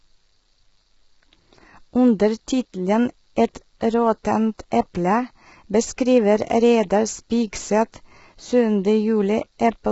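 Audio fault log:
throughout: low-delay AAC compression. The speech is heavily degraded, rough and grainy, with a hissy fill between the voice harmonics and nothing at all above 7.7 kHz. The likely cause is a low-delay codec such as AAC-ELD at a starved rate, which fits something near 16 kbps. Its short frames cannot separate closely spaced harmonics, so quantisation noise spills between them. On a spectrogram, the harmonic stripes look smeared and speckled, ending in a flat empty band above 7.7 kHz.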